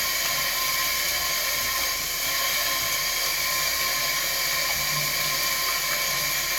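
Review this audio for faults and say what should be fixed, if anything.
No faults heard; nothing needs fixing.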